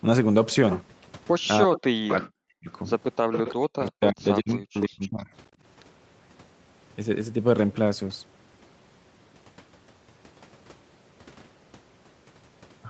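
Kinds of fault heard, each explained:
Speech suppressed in double talk: The echo canceller likely could not separate the local talker from loudspeaker echo while both sides spoke, so it turned everything down. The speech dips or breaks up from 1.65 to 2.69 s, 3.39 to 4.24 s and 4.4 to 5.32 s, by up to about 40 dB.
Echo leak: The loudspeaker side's echo canceller likely let part of the played-back call slip through its microphone and return. Delayed copies 343 ms late appear at 2.1–2.16 and 3.32–3.52 s, only about 5 to 10 dB below the speech, then faint scraps 302 ms late at 4.49–4.54, 4.76–4.82 and 5.01–5.23 s.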